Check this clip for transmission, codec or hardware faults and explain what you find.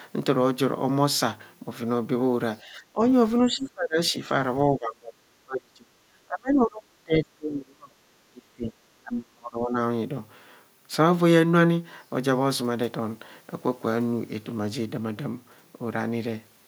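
Speech suppressed in double talk occurs five times, at 2.63–3.01 s, 3.47–4.30 s, 4.68–7.97 s, 8.28–8.77 s and 9.02–9.78 s. The cause is likely an echo canceller that confused this talker with loudspeaker echo while the far side spoke, and pulled both down. The speech dips by about 15 dB in the first event, about 25 dB in the second and fourth, about 30 dB through the long stretch from 4.68 s, and up to about 35 dB in the last. It loses level.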